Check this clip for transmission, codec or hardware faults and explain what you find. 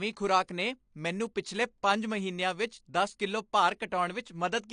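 One fault runs through the whole clip: AAC compression, plainly audible. Nothing reaches above 10 kHz, so the speech sounds dull, and sibilants and sustained vowels carry a smeared, warbling fizz. The likely cause is an AAC-LC encoder working at a low bitrate, around 32 kbps. To stay within that budget it quantises each frame's spectrum coarsely, dropping the top band and leaving gaps or noise-filled bands.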